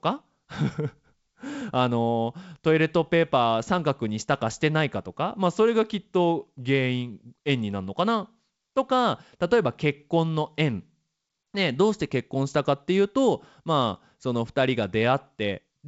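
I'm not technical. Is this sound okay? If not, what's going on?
Yes, no faults here.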